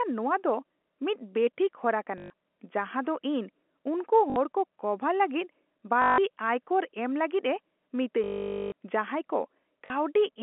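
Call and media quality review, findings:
Packet loss with last packet repeated: short robotic stutters and a buzzy tone, at 2.18–2.30 s (just before "ᱡᱟᱦᱟᱸ ᱫᱚ"), 4.30–4.36 s, 6.02–6.18 s, 8.24–8.72 s and 9.86–9.90 s. The 8.24 s event is the longest, 480 ms, with sustained buzz. Buzz near 50 Hz fits 20 ms packets. Probable component: jitter buffer / packet loss concealment. Lost packets are replaced by replaying the last one, misaligned with pitch. Line band of 250 Hz–3.4 kHz, as expected from G.711 mu-law.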